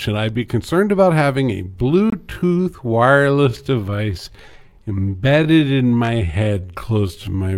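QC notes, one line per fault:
1.52–7.57 s, time-stretched section: pace abruptly slows to 0.66x with pitch unchanged, likely from repeated short pieces. It shows elongated syllable shapes on the spectrogram.
2.10–2.13 s, Bluetooth stall: 23 ms of silence, then the sound resumes, likely from the buffer running dry awaiting resent packets. It shows as a flat waveform gap and a blank vertical strip on the spectrogram.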